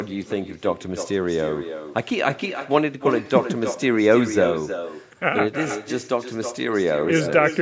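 Throughout the speech, echo with no canceller: the far end's loudspeaker feeds its microphone, returning a thinner copy about 9 dB down, roughly a third of a second late.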